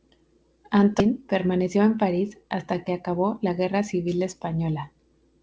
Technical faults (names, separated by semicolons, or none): skip ahead; jitter buffer speed-up